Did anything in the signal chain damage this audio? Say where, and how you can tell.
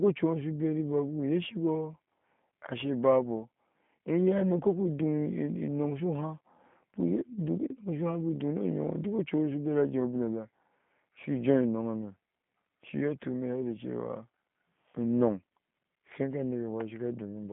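Yes, at the codec stage: the whole clip carries G.729 damage. Nothing reaches above about 3.6 kHz, and the speech has that rough, slightly synthetic texture of a low-rate model rebuilding the voice frame by frame, which fits the 8 kbit/s G.729A variant.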